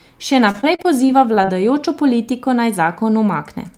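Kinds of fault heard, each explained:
Repeated packet loss (robotic sound): audio packets kept going missing or arriving late between 0.51 and 1.55 s, and each hole was patched by stretching the last sound. This leaves nine short gaps, the longest 37 ms, that make the speech choppy and robotic.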